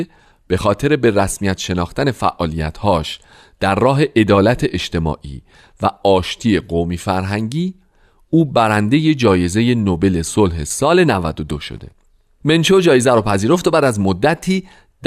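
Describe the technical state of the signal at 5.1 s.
At 5.1 s the speech signal is intact, with no audible fault at that moment.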